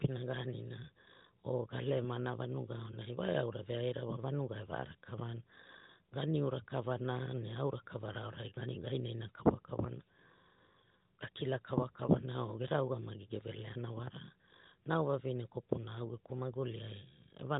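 No technical faults can be heard in this recording.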